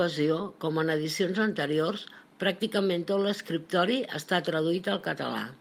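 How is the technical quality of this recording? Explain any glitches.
No technical glitches can be heard in this speech recording. There is nothing here that needs explaining.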